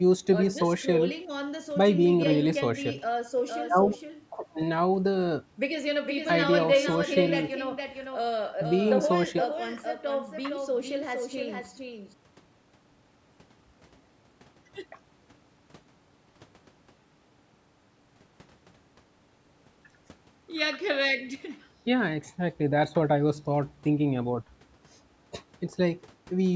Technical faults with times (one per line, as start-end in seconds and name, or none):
3.46-12.14 doubled audio track